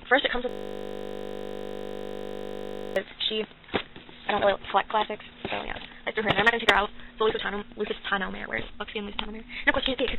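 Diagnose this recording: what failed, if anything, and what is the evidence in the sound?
A system hang loop runs from 0.49 to 2.96 s at the driver or buffer stage: one 20 ms slice of audio repeats exactly, over a hundred times, as a steady 50 Hz buzz. The host froze while the hardware kept replaying the same ring buffer.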